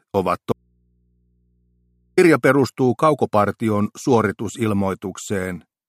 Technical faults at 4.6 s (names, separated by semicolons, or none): none